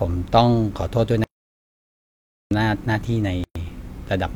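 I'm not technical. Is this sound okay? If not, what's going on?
No. From 1.24 to 2.51 seconds the speech stops dead for about 1.3 seconds. This is an audio dropout to silence. The gap is totally empty, with no background hiss at all. The likely cause is a lost connection or accidental mute. Whatever was said there is missing.

At 3.44 seconds there is a short hole of about 0.12 seconds. This is a gap at a join of encoded pieces. Two separately saved parts were stuck together, and each brought a bit of blank padding. The speech then carries on where it stopped.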